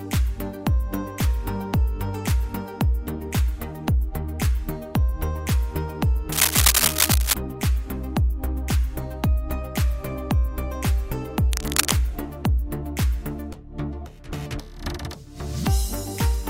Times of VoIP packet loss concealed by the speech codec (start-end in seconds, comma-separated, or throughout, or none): none